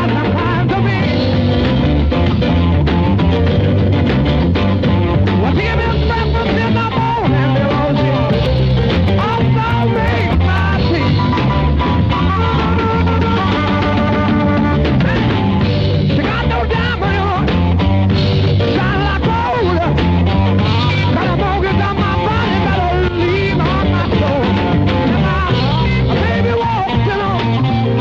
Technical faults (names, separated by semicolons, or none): periodic USB or driver dropouts